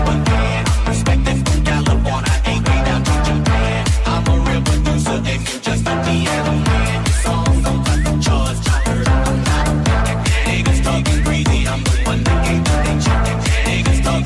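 Nothing in the audio stood out as a technical problem on listening.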